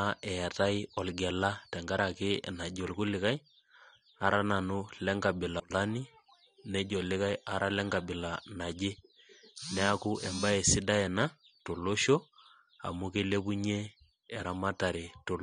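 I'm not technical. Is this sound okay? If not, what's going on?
No, the speech sounds dull and plainly watery from start to finish, likely from AAC compression: nothing above 9.7 kHz, and a warbling fizz that plain muffling wouldn't cause.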